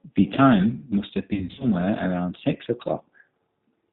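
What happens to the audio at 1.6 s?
Packets were dropped between 1.34 and 1.66 s, about 180 ms lost over roughly 260 ms, and the G.729 decoder concealed the gaps by extrapolating its last pitch and filter. The sound turns into a buzzy tone or coloured noise that fades, and stays weak or distorted just after. Underneath, G.729 compression, consistent with an 8 kbit/s codec, removes everything above 4 kHz and leaves a rough, synthetic edge.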